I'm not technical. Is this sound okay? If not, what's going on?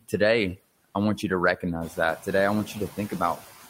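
No, there are noise suppressor artifacts all the way through: the background noise gets pushed down hard between words and bobs back up underneath them. The room's own background noise also gets louder around two seconds in.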